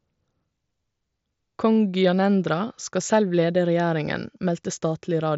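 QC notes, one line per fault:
No faults found.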